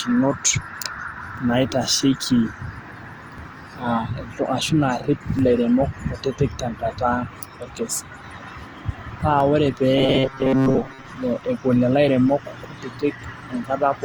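Throughout, the speech sounds swirly, hollow and smeared, with soft attacks. This is likely generation loss from several passes through Opus at about 48 kbit/s, seen as blotchy spectral holes on a spectrogram.

Overlapping chunks cause brief clicks at 1.38, 3.38, 5.39, 7.40, 9.40, 11.41 and 13.42 s, every 2 s, where 7.07 ms replays. The waveform shows a small discontinuity at each join.

From 9.97 to 11.10 s the speech becomes a rigid metallic buzz at 133 Hz. This is likely robotic sound from repeated short buffers, with most of the real audio skipped, and it shows as evenly spaced harmonics on the spectrogram.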